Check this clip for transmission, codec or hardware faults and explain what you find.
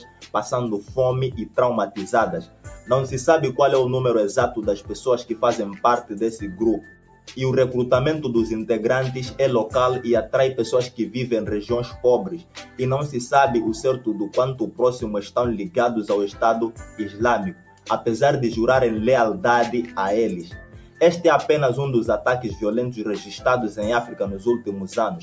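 The clip has one processing fault that runs throughout, and it bites hardest at seven points. The audio passed through call microphone processing, which caps content at 8 kHz and is normal.

Noise suppressor applied to music or sounds, present from start to finish: a suppressor built for speech was left active, so it mistakes sustained tones, ambience and reverberant tails for background noise. It keeps turning them down, swinging the level by roughly 10 dB. Sharp onsets pass, while held material sags, making the sound pump and thin out instead of sitting steadily.

Sound cut by the noise suppressor, at 0.0–0.31 s, 2.43–2.89 s, 6.8–7.32 s, 12.36–12.79 s, 16.72–17.2 s, 17.53–17.87 s and 20.44–21.01 s: in each of these spans the suppressor judged the sound to be noise and attenuated it more than its surroundings, by about 11 to 12 dB at the deepest point. Each dip lasts roughly a third to half a second. 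Steady or decaying content sinks noticeably or has its tail clipped short, and the level then recovers.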